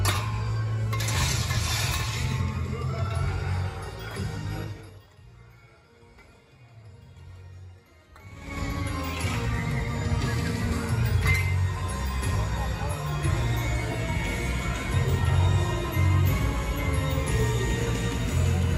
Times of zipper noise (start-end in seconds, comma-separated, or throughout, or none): 8.24-8.60